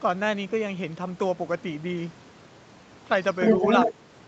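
From 3.42 to 3.93 s, a second voice comes through over the talker. This is the other side's voice leaking through. It is about 5 dB louder than the main speech. It is band-limited like the rest of the call audio, with nothing above 8 kHz. The likely cause is that the far end played on a loudspeaker and the echo canceller failed to remove it from the microphone.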